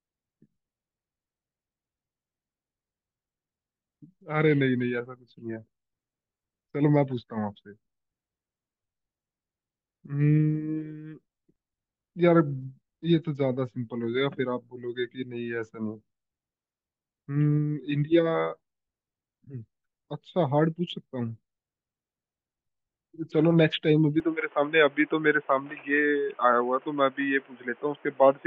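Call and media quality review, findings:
Speech band-limited from 24.2 s to end: nothing above 3.5 kHz, boxy tone, new background noise roughly 30 dB under speech. No gap, level steady. Likely input switched to a poorer device; added noise floor distinguishes it from codec bandwidth drop.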